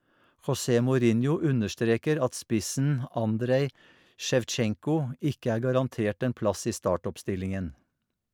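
No technical faults can be heard anywhere in the recording. Nothing interrupts or alters the audio at any point.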